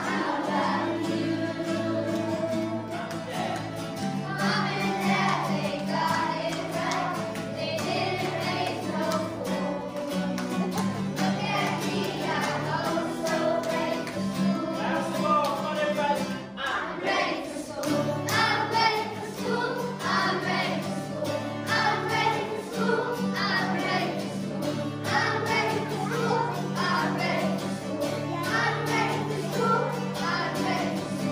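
No dropouts, clicks, distortion or timing errors turn up anywhere in the audio.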